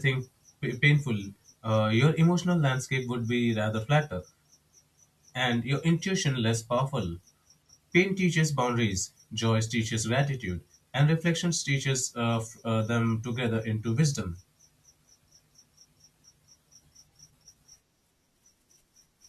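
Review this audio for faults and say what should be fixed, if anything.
Nothing in this speech recording needs to be fixed, as no faults can be heard.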